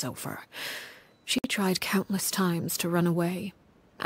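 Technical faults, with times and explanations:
1.39–1.44 s: gap at a join of encoded pieces. Two separately encoded sections were joined without trimming the encoder's start delay and end padding, so a silence of 57 ms cuts into the continuous sound, with smeared edges, before the sound resumes where it stopped.
2.20 s: repeated buffer. Fresh audio arrived late, so the playback device replayed its last buffer once, losing a millisecond or two of sound. The repeat lasts about 1.33 ms, which fits a 64-sample buffer, so it is heard as a click or brief buzz.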